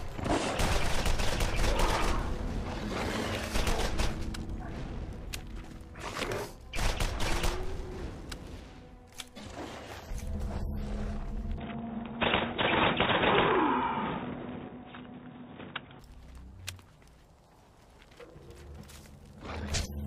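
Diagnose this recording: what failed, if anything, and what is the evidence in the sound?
From 11.58 to 16.0 s the top end vanishes, with nothing above 3.8 kHz, and returns cleanly, with no gap and no level jump. A faint new background hiss appears with it. This likely points to the input switched to a poorer device at the driver stage, not a codec bandwidth drop, which would not bring its own noise floor.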